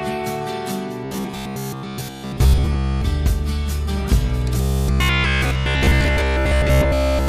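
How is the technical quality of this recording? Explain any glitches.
The recording has two glitches. Robotic sound from repeated short buffers runs from 1.05 to 3.02 s and 4.61 to 7.28 s. Short chunks are likely repeated most of the time, imposing a rigid 66.7 Hz metallic buzz that fits a 15 ms buffer.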